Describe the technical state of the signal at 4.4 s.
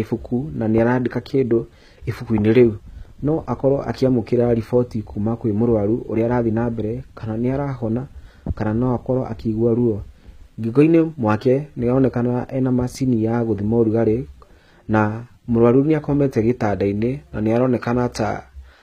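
At 4.4 s the speech carries HE-AAC compression damage that runs through the whole clip, likely from low-bitrate coding around 20 kbps. The treble is rebuilt by copying lower bands upward, so it is misaligned and gritty, with sibilants metallic, and nothing above 14.9 kHz.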